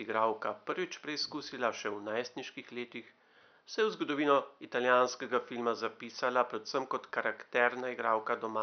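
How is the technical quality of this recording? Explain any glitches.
No glitches can be heard in the recording: the signal stays continuous and undistorted throughout, with only the room's own background noise sitting about 42 dB below the speech.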